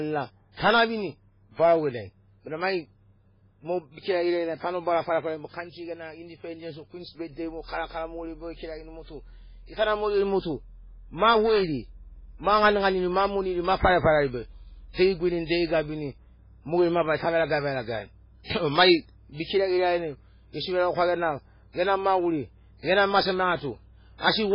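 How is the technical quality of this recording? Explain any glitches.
The recording is speech with three audible problems: codec damage over the whole clip, one pre-echo, and mains hum through the second half.

Throughout, the audio has heavy coding damage: a watery, swirly texture, smeared consonant attacks, and nothing above 5.3 kHz. This points to low-bitrate MP3 compression as the likely cause, consistent with roughly 16 kbps. With so few bits, the encoder drops weak frequency lines frame by frame and cuts the treble outright.

From 4.00 to 4.05 s there is a pre-echo: a 47 ms burst of hiss arrives just ahead of a sharp attack, which then sounds softened. The transform block spreads quantisation noise, scaled to the loud onset, back into the quiet instant before it.

Starting at 11.76 s, just after "geri mot u ma", and running to the end, there is mains hum: a steady 60 Hz tone roughly 30 dB below the speech. 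Power-line current is coupling into the signal path, typically through a ground loop or a nearby transformer.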